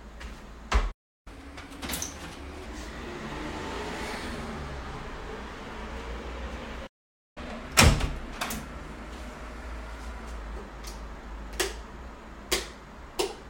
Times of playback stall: 0.91-1.28, 6.86-7.38

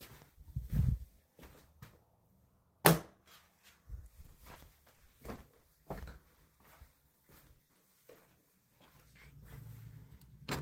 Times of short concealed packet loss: 7.11-7.15, 7.57-7.77, 8.13-8.17

